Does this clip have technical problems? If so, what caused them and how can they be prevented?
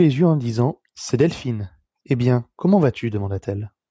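No, this speech shows no technical faults; it has simply passed through ordinary call microphone processing, which trims the lowest bass and leaves nothing above 8 kHz, as expected for that path.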